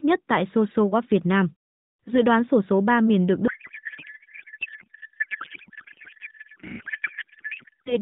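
From 3.48 s, just after "miền được", to 7.99 s, a codec payload misread occurs: octet-aligned AMR frames are unpacked as bandwidth-efficient, shifting every field. The speech collapses into garbled noise and warble that barely tracks it, persisting nearly to the end.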